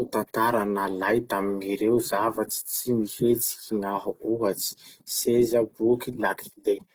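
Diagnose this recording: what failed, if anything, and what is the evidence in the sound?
The codec stage failed. Plainly audible damage runs through the whole speech clip: voiced sounds turn grainy and rough rather than swirling. That texture, with the full band kept, fits Opus compression in its CELT music mode at a low rate around 16 kbps as the likely cause. On a spectrogram, energy fills every band up to about 20.3 kHz with few holes, but the harmonics smear into noisy, speckled texture. The waveform itself looks unremarkable.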